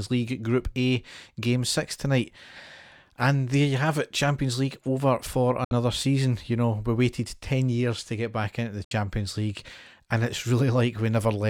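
At 5.64 s and again at 8.84 s the speech snaps to silence for about 0.07 s, with a fade of only about 3 ms, then resumes further along. These are digital broadcast dropouts: the receiver muted over failed frames, which fits two frames totalling 64 ms of programme that never arrive each time.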